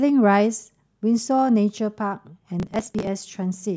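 A speech clip in which, from 2.6 s to 3.07 s, a burst of gritty crackle tears through the sound, then stops. This is processor overload crackle: the processor couldn't finish its small audio buffers on time, and dozens of deadlines were missed in quick succession. Each missed buffer was simply skipped, leaving a tiny hard-edged gap, and the buffers were roughly 7 ms long.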